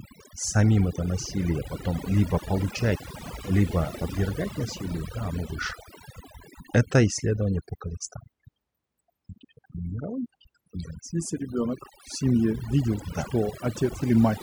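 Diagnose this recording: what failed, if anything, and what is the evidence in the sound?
Across the whole speech recording the background drops away, breaking up into twinkling specks, while the voice has its softer edges eaten away. That points to overdone noise removal at the processing stage: a noise reduction tool set too hard pushes individual frequency bands down or out whenever they resemble its noise estimate, so quiet speech detail vanishes along with the noise and stray bands flicker on and off as tonal specks.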